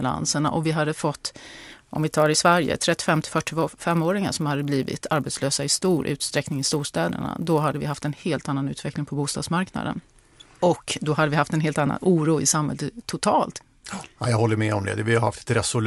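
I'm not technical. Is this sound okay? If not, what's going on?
No, not quite. Between about 1.55 and 8.22 seconds, right after "och vi hade fått" and up until "annan utveckling på bostadsmarknaden", there's a buzz riding along with the voice. That's a resampler restarted on every block: the speech was converted in tiny 10 ms chunks, each handled as if it stood alone, so every seam leaves a little tick. A hundred ticks a second blur into a buzz, and it's only there while someone's talking.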